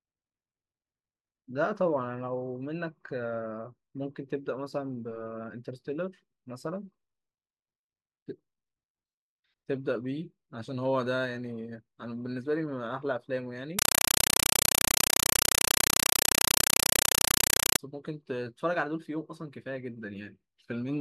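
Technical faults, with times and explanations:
13.79–17.79 s, compressed stream played as audio: for four seconds the speech gives way to very loud, harsh chattering static. An AC-3 (Dolby Digital) bitstream reached the output as raw samples without being decoded. Each coded frame appears as a burst of noise about 5.33 ms long followed by silent padding, repeating at 31.25 Hz. That regular burst-and-gap cycle produces the buzzing chatter, and a density that fits a 256 kbps stream.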